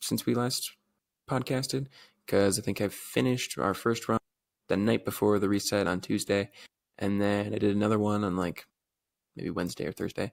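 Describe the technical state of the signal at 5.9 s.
An overlap between stream segments occurs at 5.86 s, just after "night before the reset". Two 4 s segments claim the same stretch of time, so the player trims a sliver of sound that was never duplicated. The waveform jumps across the gap, heard as a tiny skip.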